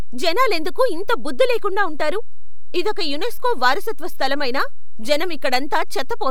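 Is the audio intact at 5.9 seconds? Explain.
No. A DC offset of about −16 dBFS runs through the whole speech clip, 5.9 s included. It shifts the waveform off zero and eats headroom, visible as steady energy at 0 Hz on a spectrogram.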